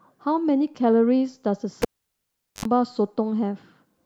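At 1.82 s the speech cuts off with a pop as a live cable is pulled and plugged in again. Near silence follows for about 780 ms. A roughly 70 ms, 50 Hz mains buzz while only the tip touches, then a second pop at 2.65 s, separates it from a digital dropout.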